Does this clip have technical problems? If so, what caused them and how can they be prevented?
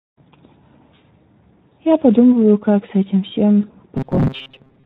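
Yes. The Speex codec runs throughout, leaving the speech plainly hoarse and noisy. This fits a low setting near 11 kbps with too few bits for the excitation. Prevent it by using a higher Speex quality or a modern codec such as Opus.

VoIP packet loss concealed by the speech codec occurs at 1.70–1.75 s and 3.61–3.66 s. Each gap fits a single lost 20 ms frame. The decoder bridged it by extending the previous pitch and filter with falling gain, so the sound turns briefly buzzy or noisy and weak. Prevent it with a more reliable network path, forward error correction or a deeper jitter buffer.

Robotic sound from repeated short buffers runs from 3.97 s to the end. It is a rigid, metallic buzz near 133 Hz, which matches a repeated block of about 7.5 ms. Roughly half the audio appears to be replaced by repeats, likely because new audio arrived too seldom. Prevent it with larger audio buffers and enough CPU priority for the audio thread.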